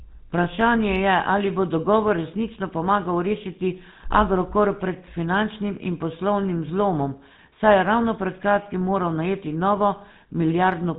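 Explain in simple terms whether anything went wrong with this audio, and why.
GSM full-rate codec damage runs through the whole clip, from the first moment to the last. This old mobile-phone codec rebuilds speech by modelling the throat and mouth and driving that model with evenly spaced pulses, keeping only a fraction of the original detail. That gives the speech its plainly audible buzzy, gravelly roughness. Nothing above 4 kHz gets through, so the speech also sounds muffled and narrow, like a phone call.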